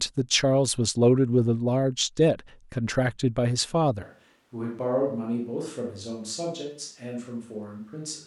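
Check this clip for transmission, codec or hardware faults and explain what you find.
One fault appears, a switch to a distant microphone, from 4.03 s to the end of the speech. The close microphone's feed most likely dropped out or was left out, and the recording falls back to a pickup further from the talker. The sound changes abruptly at that point. The speech turns roomy and hollow and loses bass, and its level drops by roughly 10 dB. Room noise also becomes audible, sitting roughly 35 dB below the speech.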